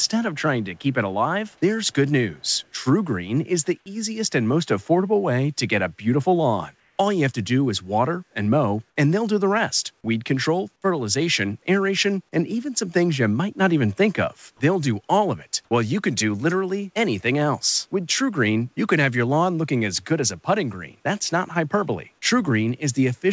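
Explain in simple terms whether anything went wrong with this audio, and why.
Two things went wrong. First, an echo leak: the other end was likely on a loudspeaker, and its echo canceller let some of the sound slip back. You hear a very faint copy of the speech trailing about 0.22 seconds behind, at 0.03–0.07, 0.62–0.81, 1.47–1.60, 1.86–1.93 and 2.35–2.64 seconds.

Second, comfort noise in place of the background: during a brief pause the sending side likely stopped transmitting and the receiver filled the gap with made-up hiss. From 6.80 to 6.98 seconds the real room sound is swapped for a flat, slightly quieter noise lasting about 0.18 seconds.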